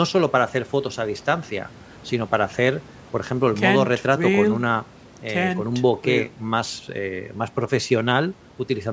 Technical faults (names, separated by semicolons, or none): none